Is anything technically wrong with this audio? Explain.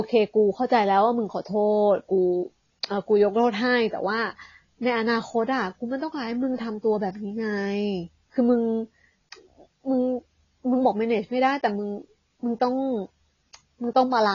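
Yes. Throughout the speech, nothing reaches above 7.1 kHz, and the sound is dull and smeared with a warbly, fizzy texture on sibilants. This is likely AAC compression at a low bitrate, perhaps around 24 kbps, where the encoder drops the top band and coarsely quantises what remains. A spectrogram shows a hard ceiling at 7.1 kHz.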